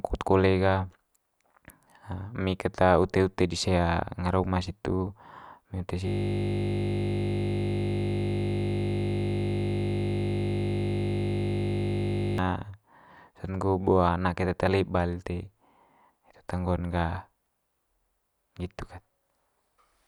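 At 6.08 s, just after "uma situ emi ute", the system froze while the audio hardware kept cycling through its 20 ms ring buffer, a system hang loop. Until 12.38 s the speech becomes a steady 50 Hz buzz as that same fragment repeats about 315 times.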